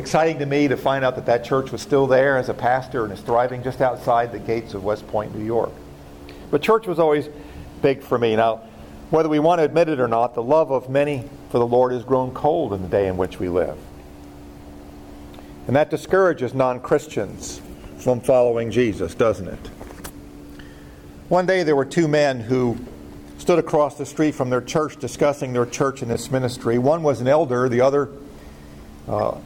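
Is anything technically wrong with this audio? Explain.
Yes. Three corrupt frames were decoded: 3.48–3.51 s, 26.13–26.19 s and 29.16–29.20 s. Damaged bits misdirected gains and codes, so energy landed at wrong frequencies. Each is a brief burst, about -25 dBFS, but about -10 dBFS at 26.13 s, where about four frames were hit.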